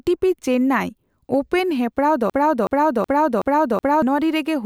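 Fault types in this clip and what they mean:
Broken-record loop: Playback or streaming likely stalled and kept re-sending the last piece of audio it held instead of moving on. From about 2.30 s to 4.02 s, a fragment of speech roughly 0.37 s long repeats exactly, back to back, five times. It sounds like a stuck, stuttering replay, and whatever speech should have followed in those 1.7 seconds never arrives.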